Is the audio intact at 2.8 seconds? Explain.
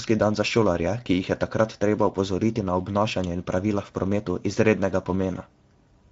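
No. At 2.8 s the speech carries Speex codec damage, present for the whole clip. This CELP coder spends too few bits on the excitation signal, so the voice sounds plainly noisy and hoarse, consistent with a middle-quality setting near 16.8 kbps.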